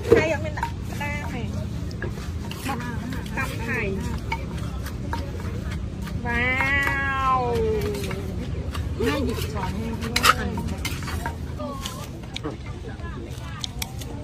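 No technical faults can be heard anywhere in the audio; the signal stays steady and intact from its first moment to its last.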